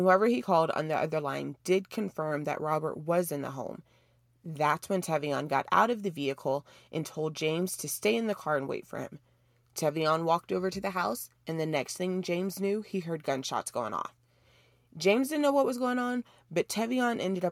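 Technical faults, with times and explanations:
No technical faults were found in this speech recording.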